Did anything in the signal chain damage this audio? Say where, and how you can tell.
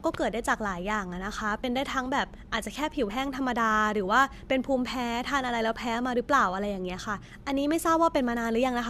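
Yes, at the codec stage: compressed frames were skipped at 1.63 s and 3.09 s. Each time the speech jumps ahead by about one 23.2 ms frame, with a soft smeared blip rather than a sharp click or a silent gap, because overlapping frames blend across the join.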